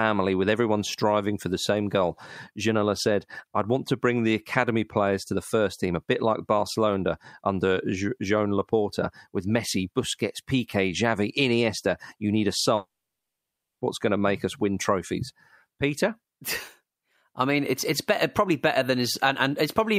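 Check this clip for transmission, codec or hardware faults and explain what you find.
One fault appears in the speech, a long network dropout from 12.75 to 13.82 s. The last sound smears into a brief fading buzz, then about 0.94 s of silence follows. The likely cause is lost packets with concealment running out, and speech resumes with roughly a second missing.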